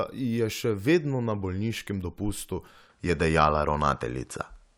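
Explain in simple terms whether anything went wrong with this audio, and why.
At 2.9 s the speech abruptly turns duller and shifts in level, with nothing above 11.4 kHz and faint new background noise until the end. With no gap at the change, that points to an input switched to a poorer device.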